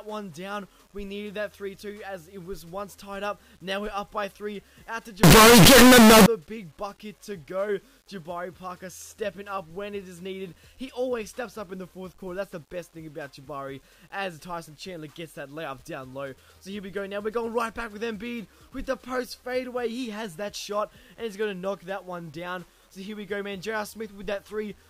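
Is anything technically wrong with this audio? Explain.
Yes, there's one clear problem. From about 5.23 to 6.26 s the audio turns into very loud, harsh distortion, and the quiet parts blast out as hard as everything else. That's likely a signed and unsigned mix-up on the 8-bit samples. Flipping the top bit turns every small swing around zero into a leap across the full range.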